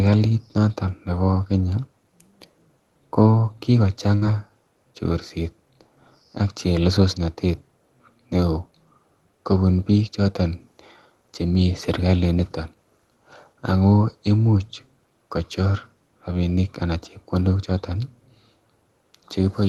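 At 4.15 s, a burst of packet loss hits the speech and lasts until 4.24 s. The receiver stretches the last sound for about 60 ms, fading it out. That gap sounds like a brief held buzz or hiss. Then about 60 ms of speech is simply gone.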